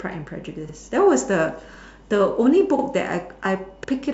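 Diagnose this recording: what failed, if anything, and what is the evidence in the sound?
Overlapping chunks at 0.69, 1.74, 2.79 and 3.84 s: at each point a 50 ms slice of the speech plays twice, giving a brief stutter or click on a steady 1.0 s rhythm. The fault sits at the buffer or block-processing stage. The audio was handled in 1 s chunks, and each new chunk began 50 ms before the previous one finished, so the tail of one block and the head of the next were both output at every join.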